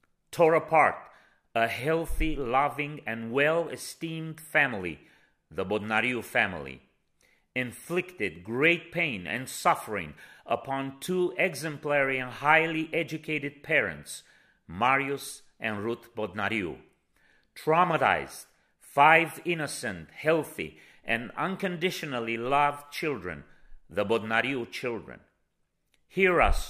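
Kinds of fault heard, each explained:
None: there are no kinds of fault heard in this clip.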